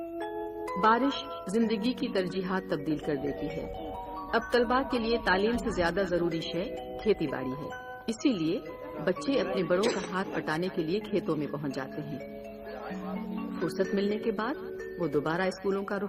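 Clock drift between sender and receiver, with the sender's clock running about 5 percent fast, keeps overfilling the receiver's jitter buffer, so the audio never settles into a perfectly steady pace. To keep up, the receiver makes repeated timing corrections from 0.25 s to 16.08 s, trimming short pieces at uneven intervals to track the faster 105 percent rate, which comes through as faint hiccups and a slightly unsteady tempo.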